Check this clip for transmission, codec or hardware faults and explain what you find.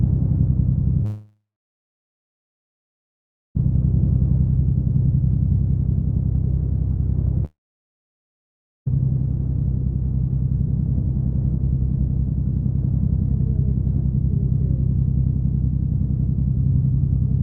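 There are two gaps where the audio drops out, and they sound like a long network dropout. From 1.05 to 3.57 s about 2.5 s of sound goes missing, and from 7.45 to 8.88 s about 1.4 s goes. Each time, the last bit of sound trails on as a short fading buzz before turning to plain silence, about 2.1 s in the first gap and 1.3 s in the second. The stream then picks up later with that chunk simply gone. That's likely packets failing to arrive while the receiver briefly papered over the hole before giving up.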